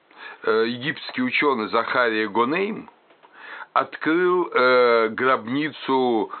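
No technical faults can be heard in this recording.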